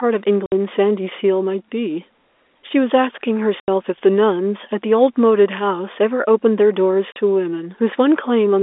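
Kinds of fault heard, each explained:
Packet loss filled with silence: packets carrying the audio never reached the receiver, and instead of concealing the gap it played silence in their place. The speech drops out abruptly three times, for 60 ms at 0.46 s, 80 ms at 3.6 s and 40 ms at 7.12 s. These lengths fit a 20 ms packet size. Each hole starts and stops on a hard edge.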